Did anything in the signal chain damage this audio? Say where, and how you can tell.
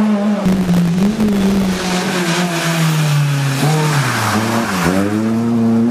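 Yes, at the driver or buffer stage: processor overload crackle from 0.48 to 1.94 s. Dense, tiny silent gaps with hard edges produce a gritty tearing that stops abruptly, which fits very short buffers of about 1.5 ms missing deadlines in a row. A single dropout would leave one clean hole instead.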